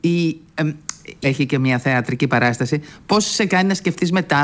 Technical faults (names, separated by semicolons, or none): skip ahead; jitter buffer speed-up